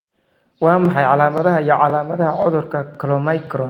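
Overlapping chunks in this speech clip: each half-second block begins about 23 ms before the previous one ended, so that sliver plays twice, producing regular stutters at 0.85–0.88, 1.38–1.40, 1.90–1.92, 2.42–2.45, 2.95–2.97 and 3.47–3.49 s.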